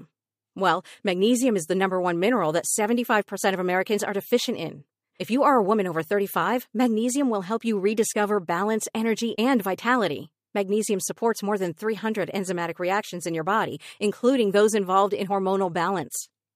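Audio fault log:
The speech recording has no faults to log. Nothing heard in it calls for an entry here.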